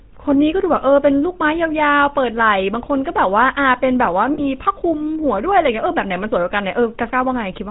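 GSM full-rate codec coding runs through the whole speech clip, and its damage is plainly audible. The codec keeps only a model of the vocal tract plus a sparse, regularly spaced pulse excitation, discarding two of every three excitation samples, so the voice comes out buzzy and gravelly rather than smooth. Nothing above 4 kHz survives, which dulls sibilants and air. The sound points to the 13 kbps full-rate mode.

Lost GSM frames occur from 4.34 to 4.45 s, where about 40 ms of audio went missing, which fits two consecutive 20 ms frames being dropped. The decoder filled the gap by reusing the parameters of the last good frame, so instead of a clean dropout the sound freezes into a brief, rough, metallic ring before normal decoding resumes.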